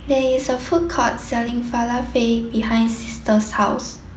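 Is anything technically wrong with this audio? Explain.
No, nothing stood out as technically wrong on listening to this speech recording.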